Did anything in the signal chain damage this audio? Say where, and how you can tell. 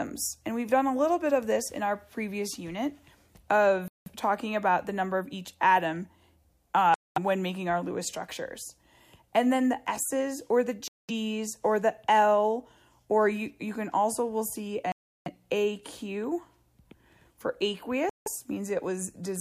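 Yes. Playback shows silent gaps of 0.17 to 0.34 s at 3.88, 6.94, 10.88, 14.92 and 18.09 s, likely Bluetooth stalls where the headphones' buffer emptied while waiting for resent packets.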